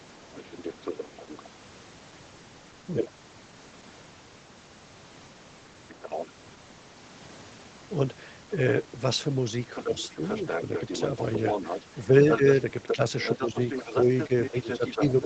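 From 0.02 to 1.45 s a faint second voice sits underneath, roughly 15 dB below the speech. From 9.75 s to the end it returns much louder, only about 5 dB down. This is the other side's voice leaking through, likely far-end audio from the loudspeaker that the echo canceller failed to remove from the microphone.

While that second voice is present, the main talker's level briefly sinks at 9.84 to 10.68 s, 12.96 to 13.57 s and 14.28 to 15.01 s, each time by a fraction of a second, dipping by about 5 dB first and about 10 dB later. This is speech suppressed in double talk, likely the echo canceller turning down its own talker because it could not separate that voice from the overlapping echo.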